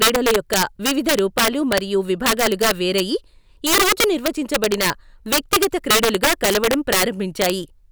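Throughout the speech, integer overflow breaks up the loudest peaks: the signal is driven about 8 dB past full scale, and a small fraction of samples, around three percent, wrap to the opposite sign instead of limiting, producing harsh, violent cracks far sharper than clipping.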